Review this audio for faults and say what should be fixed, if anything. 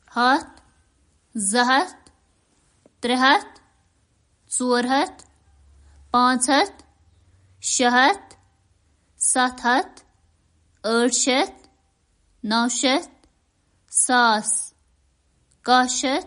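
MP3 compression, throughout the clip: the speech has plainly audible codec damage, with nothing above 10.6 kHz and a watery, swirling texture, which likely comes from lossy MP3 encoding. Short of bits, the encoder cut the treble at a fixed point and dropped quieter frequency components, which then flicker in and out between frames and smear consonant edges. The degree of damage fits a low rate of around 41 kbps. To prevent it, keep a lossless master and, if MP3 is required, encode at a much higher bitrate.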